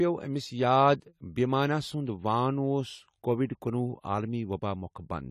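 It's a speech clip with AAC compression damage plainly audible from start to finish: nothing above 14.1 kHz, a dull, smeared top end, and a watery, fizzy edge on sibilants. That's likely an AAC-LC encode at a low rate, fitting roughly 32 kbps.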